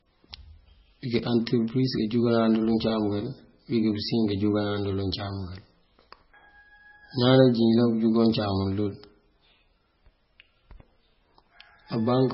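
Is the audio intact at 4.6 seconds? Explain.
No, at 4.6 s the speech sounds watery and swirly with nothing above 5.6 kHz, likely from heavy MP3 compression present throughout, consistent with a very low bitrate around 17 kbps.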